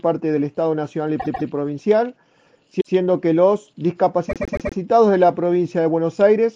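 Repeated frames cause stutters three times. At 1.19 s a 144 ms block plays twice more. At 2.80 s a 144 ms block plays once more. At 4.29 s a 120 ms block plays four more times. Replaying the same compressed frames lengthens the audio by 0.91 s.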